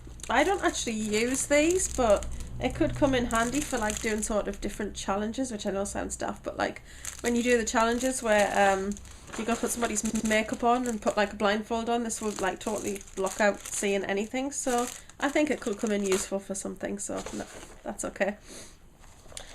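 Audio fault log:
10.09–10.29 s, repeated frames: a short chunk of about 100 ms plays twice more right after the first time through, so you hear a quick stutter. That's a run of compressed frames being sent or written more than once, something like five frames' worth, and the decoder just plays them again. It adds about 200 ms to the clip.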